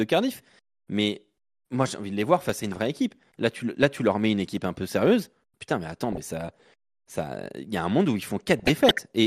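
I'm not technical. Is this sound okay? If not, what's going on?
No. Throughout, the speech sounds dull and plainly gurgly, with a grainy edge. That is MP2 compression, likely from squeezing the audio too hard so upper frequencies drop out.

There are also three bursts of DAB burbling, short blips of noise where bit errors from weak reception corrupt parts of the sound: 2.43 to 2.77 s after "envie de les voir", 6.12 to 6.25 s after "mais attends", and 8.59 to 9.01 s after "un monde où ils".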